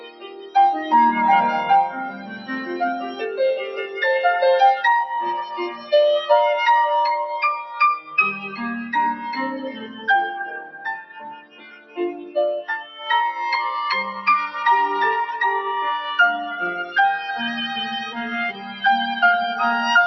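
Noise suppressor applied to music or sounds, across the whole clip: a speech-tuned suppressor treats sustained, steady content as noise, so the level pumps by roughly 10 dB. Sound cut by the noise suppressor at 0.0–0.92 s, 1.89–4.02 s, 5.44–5.92 s, 7.63–8.58 s, 9.66–10.08 s, 10.57–12.36 s, 12.81–13.06 s and 18.53–18.82 s: held or decaying sound sinks and thins, by about 19 dB at the deepest point in 10.57–12.36 s and about 18 dB at the start.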